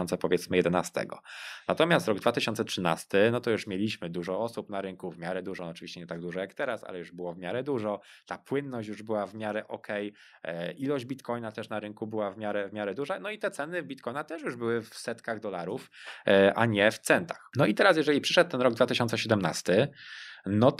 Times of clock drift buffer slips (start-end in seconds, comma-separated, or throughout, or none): none